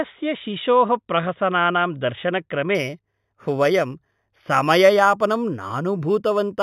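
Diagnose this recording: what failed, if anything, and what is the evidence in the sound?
From 2.75 s to the end at about 6.6 s the speech turns dull at the top while a faint metallic shimmer rides on sibilants. This is imaging from linear upsampling at the sample-rate conversion stage. The rate was raised by joining samples with straight lines, a weak filter, which fits a jump from 8 kHz to 48 kHz. Mirror copies of the 0–4 kHz band leak into 4 kHz to 8 kHz, roughly 25 dB below the speech.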